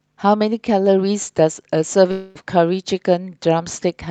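From 2.11 to 2.37 s the speech breaks off and is replaced by a smeared buzzing continuation of the last sound, lasting about a quarter of a second and fading without ever falling fully silent. The speech then resumes further along, with that stretch simply gone. This is likely a long network dropout: roughly 240 ms of audio never arrived, and the receiver concealed the gap by extending what it last had. The call path itself sounds band-limited at 8 kHz, which fits Opus at around 32 kbps.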